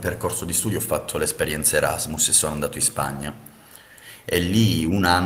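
A lost packet rebuilt from error correction falls at 3.07 to 3.09 s in this speech. The missing 20 ms, which fits a single lost packet, was filled from a low-bitrate copy carried in the next packet, so there is no gap, but that moment sounds briefly rougher and noisier.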